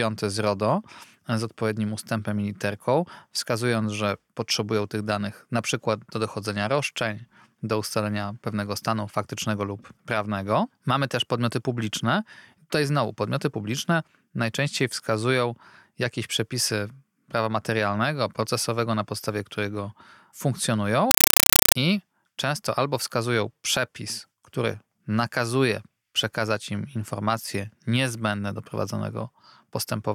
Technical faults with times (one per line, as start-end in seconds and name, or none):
21.11-21.75 compressed stream played as audio